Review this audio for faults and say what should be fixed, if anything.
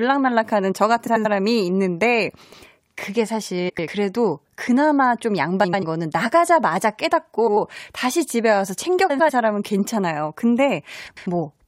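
Frames out of order occur in the speech at 1.06–1.26, 2.43–2.63, 3.69–3.88, 5.64–5.84, 7.38–7.57, 9.09–9.30 and 11.07–11.26 s. In each stretch, two adjacent blocks of about 93 ms play swapped. That gives a garbled flutter. No time is lost. Fix this with receive-side sequence numbering and a reorder buffer, so frames are decoded in their correct order.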